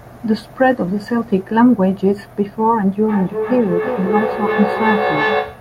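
Feedback echo between two devices, 3.08 s to the end: a second device's playback re-enters the microphone, repeating about every 0.3 s, roughly 3 dB under the speech.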